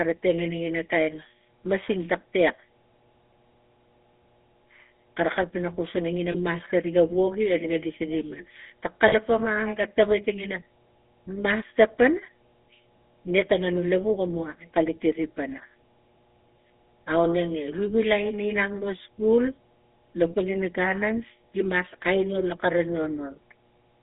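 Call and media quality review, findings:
Mains hum, present throughout: a steady 60 Hz tone sitting about 35 dB below the speech. Probable component is the analogue front end, with a ground loop or nearby transformer coupling line frequency into the signal path.

GSM full-rate codec, present throughout: plainly audible buzzy, gravelly roughness on the speech, band limited to roughly 250 Hz to 3.6 kHz, consistent with 13 kbps full-rate GSM. Pulse-train excitation kept at one sample in three through a vocal-tract model loses fine detail and all content above 4 kHz.

Lost GSM frames, 6.32–6.36 s and 9.08–9.14 s: brief rough, metallic ringing where the speech is held rather than dropped. The decoder repeats the last good frame's parameters. Lengths of about 20 ms and 40 ms point to one and two missing frames.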